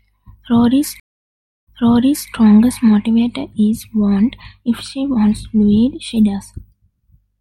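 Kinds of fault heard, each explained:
Stream reconnect: the connection dropped at 1.00 s, leaving 0.67 s of silence before a fresh decoder picked the stream up mid-flow. The speech resumes about 0.65 s earlier than where it broke, repeating that stretch, and its first frame fades in.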